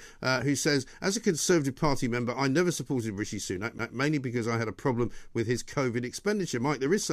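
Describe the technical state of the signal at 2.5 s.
At 2.5 s the speech signal is intact, with no audible fault at that moment.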